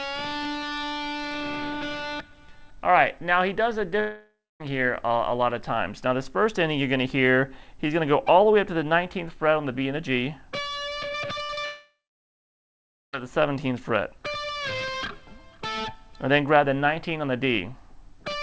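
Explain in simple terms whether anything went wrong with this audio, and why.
Yes, several things went wrong, all from the connection rather than the recording itself.

From 4.0 to 4.6 s there is a long network dropout, most likely caused by the connection stalling: the last sound is stretched into a fading buzz or hiss, then about a quarter second of near-silence, and the sound picks up later with roughly 0.6 s missing.

At 11.44 to 11.51 s there is a burst of packet loss. About 60 ms vanished, and the gap was covered by briefly holding the previous sound and letting it fade. It is shorter than a dropout.

Right after, at 11.55 to 11.59 s and again at 11.61 to 11.65 s, comes short concealed packet loss. Each time about 20 ms was patched over, heard as a tiny smear or wobble rather than a noticeable fade.

Then from 11.65 to 13.15 s a second long network dropout hits, likely because no audio arrived for a long stretch. 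After a short fading tail, about 1.2 s is essentially silent, and nearly 1.5 s of sound is simply gone. That length and silence mark it apart from the brief burst.

Throughout, the call codec carries nothing above 8 kHz, so the very highest sounds are cut off.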